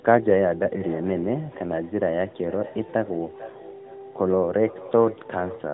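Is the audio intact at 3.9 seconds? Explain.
No, at 3.9 s you're in the middle of a feedback echo between two devices, which runs from 0.81 s right to the end. A second device in the room replays the call audio, and the first microphone picks it up again. Its echo canceller only knows its own playback, so the sound comes back roughly every 0.4 s, thin and ringy, peaking about 24 dB under the speech, on top of the usual narrowband phone-line tone.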